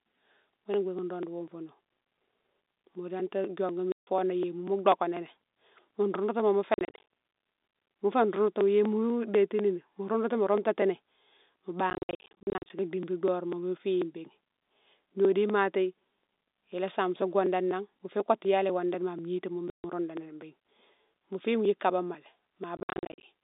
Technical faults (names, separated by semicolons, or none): packet loss filled with silence